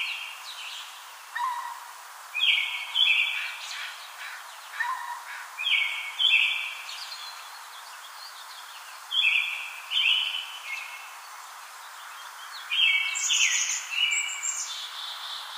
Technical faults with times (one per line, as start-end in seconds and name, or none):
none